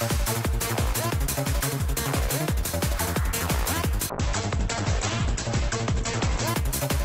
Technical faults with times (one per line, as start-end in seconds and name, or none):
4.10-6.55 call bitrate drop